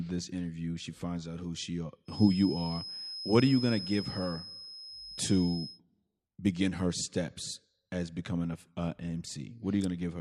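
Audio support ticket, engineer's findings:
Feedback whistle, 2.04–5.81 s. Thin steady tone at 5.1 kHz behind the speech, sitting around 10 dB below it, level swelling and fading slowly. Likely cause: speaker-to-mic loop held at the edge of feedback, one frequency sustaining without running away.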